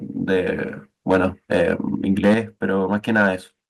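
Microphone overload, likely from input volume set too high, first appears from 1.1 to 1.26 s: peaks run about 6 dB past the converter's ceiling, a small share of samples are flattened, and the loudest syllables gain a harsh, crackly edge. At 1.15 s the input level drops suddenly by about 2 dB, a microphone volume step-down, with the software likely cutting the device's input gain in one move. Voice and background both fall at once.

Overload returns, stronger, from 2.23 to 2.34 s. The peaks run about 8 dB over the limit and roughly a tenth of the samples are clipped, so the crackle is rough. At 2.35 s the level drops by about 6 dB in one step.

A milder overload follows from 2.93 to 3.28 s, about 3 dB over with only occasional flattened peaks and a gritty edge. At 3.36 s the level steps down again, by about 5 dB.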